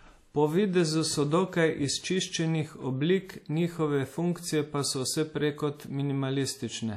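Throughout the speech there is plainly audible WMA compression damage, likely from low-bitrate encoding. The sound rings and smears, with a washy hiss that swells and fades with the signal. Nothing is present above 16 kHz. A transform codec like this works on long blocks. Its quantisation noise spreads across tens of milliseconds around each sound. Weak spectral detail gets discarded. The result fits a bitrate near 48 kbps.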